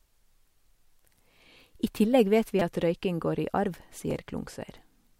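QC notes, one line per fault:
2.59–2.61 s, repeated buffer: a 5 ms slice plays several more times when fresh audio arrives late, so the hard joins give a brief buzz. A spectrogram shows a narrow vertical band with harmonic striping, and the waveform shows an identical short cycle repeating. About 20 ms of audio is skipped.
4.11 s, repeated buffer: a 5 ms slice plays once more, heard as a single click. The waveform shows one duplicated short segment with a step at each join, and the spectrogram shows a thin broadband vertical line.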